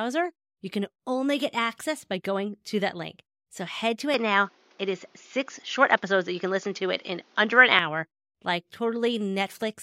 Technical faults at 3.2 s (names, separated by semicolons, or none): none